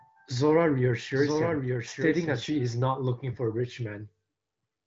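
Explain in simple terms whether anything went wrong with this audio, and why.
From the start to 2.44 s, a doubled audio track plays. A quieter copy trails about a second behind, likely from a slower second path.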